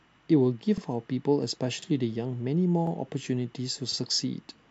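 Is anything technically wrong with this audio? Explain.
Yes. The speech has overlapping chunks, with joins at 0.78–0.82, 1.82–1.87, 2.87–2.92 and 3.92–3.97 s, roughly once a second. Each new 1.0 s chunk begins about 48 ms before the previous one ended, so that sliver plays twice. It comes across as a regular stutter or click. On a waveform, a short stretch visibly repeats at each join, and a spectrogram shows a thin vertical seam where the harmonic pattern jumps back and repeats.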